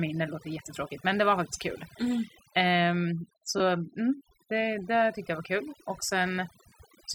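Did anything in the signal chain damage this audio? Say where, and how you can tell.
Yes. Two stages left marks. The first is call processing. Overdone noise removal runs through the whole speech clip. The background sinks to near silence, dotted with twinkling specks. The suppressor was set too strong. It pulls individual frequency bands far down whenever they sit near its noise estimate. Quiet parts of the speech fall below that line and vanish with the hiss, leaving those isolated chirps behind.

The second is the Bluetooth codec link, where LE Audio frames were lost. There are three dropouts: at 1.98 s, from 3.58 to 3.60 s, and from 6.69 to 6.72 s. Each gap turns tonal sound into a brief noisy smear. The gaps grow from roughly 10 to 30 ms, which fits one, two and three lost 10 ms frames. The LC3 decoder concealed each gap by repeating the last spectrum with random signs.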